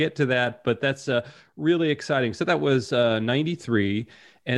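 No technical faults can be heard anywhere in the speech. There is nothing here that needs a time stamp or an explanation.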